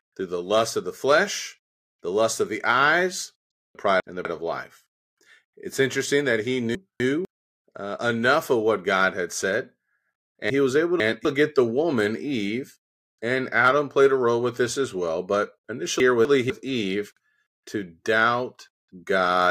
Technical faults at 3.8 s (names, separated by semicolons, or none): chunks out of order